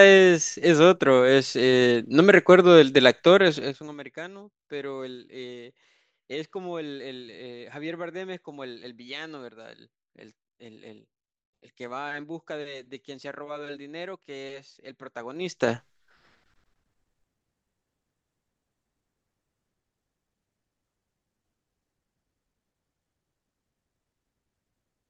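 A speech clip with zipper noise as the level drops by about 20 dB from 3.56 to 3.97 s and climbs back from 15.33 to 15.71 s: 3 dB jumps, roughly twenty a second, each ticking audibly.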